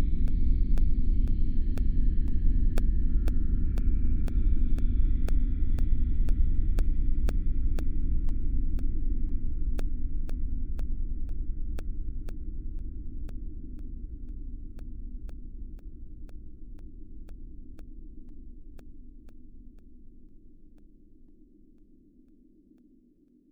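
From 0.28 s to 23.28 s the audio carries periodic USB or driver dropouts: every 0.5 s, something briefly stalls the USB bus or the audio driver, and roughly a millisecond of signal goes missing, replaced by silence. The result is a steady train of about fifty tiny gaps, heard as evenly spaced ticks at two per second. They stand out wherever sound is present and are inaudible in quiet passages, since a gap in silence changes nothing.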